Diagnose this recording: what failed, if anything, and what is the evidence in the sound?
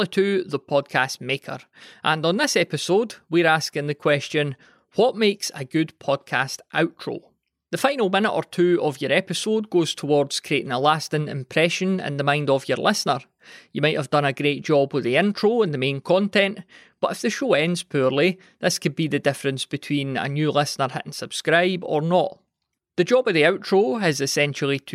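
Nothing in this speech recording points to a failure at any stage of the chain. There is no audible event that calls for a diagnosis.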